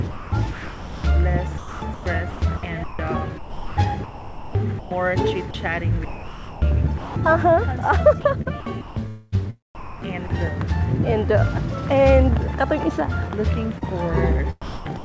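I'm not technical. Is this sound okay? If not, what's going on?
No. Three kinds of fault can be heard.

The most frequent is sound chopped by the voice detector, at 0.11–1.04 s, 1.58–4.91 s, 6.05–7.16 s, 8.21–10.30 s and 14.62–15.04 s. Within each stretch the audio keeps cutting in and out. Quieter moments are swapped for a soft artificial hiss, about 0.7, 1.7, 0.75, 0.8 and 0.3 seconds' worth respectively. This is likely the sender's automatic on/off switch misjudging faint sound as background.

Once, at 5.51–5.54 s, the same switch likely causes sound dropped by the voice detector. For about 30 milliseconds the real audio stops and only that steady hiss remains, then the sound returns. It is a single brief gap rather than repeated flickering.

At 13.78–13.84 s there is short concealed packet loss. About 30 milliseconds of audio never arrived in time. The receiving end patched the hole by stretching the preceding sound and blending back in, which comes across as a tiny smear or blip.

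The call codec carrying all of this has nothing above 8 kHz, so the top end sounds dull throughout.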